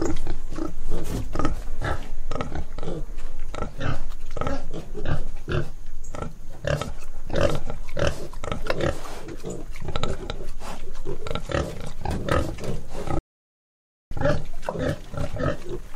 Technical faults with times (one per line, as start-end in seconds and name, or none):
13.19-14.11 playback stall